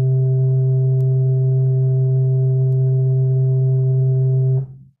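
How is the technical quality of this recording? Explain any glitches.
Two isolated clicks mar this music recording. At 1.01 s and 2.73 s there is a bit error spike: a single sample jumps, reaching about -25 dBFS and about -31 dBFS respectively, because one flipped bit shifts its value by a power of two before the next sample returns to normal. Each is a sharp tick unrelated to the music, showing as a one-sample needle on the waveform and a thin full-height vertical line on a spectrogram.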